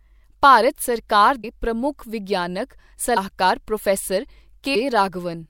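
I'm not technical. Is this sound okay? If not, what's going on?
No. The speech has compressed frames skipped at 1.43, 3.16 and 4.74 seconds. At each point, small chunks of the stored audio never get played, so the talking jumps forward: a short moment at 1.43, about a tenth of a second at 3.16, and nearly half a second at 4.74. Unlike a dropout, there's no silent gap, just a jump where the sound leaps ahead.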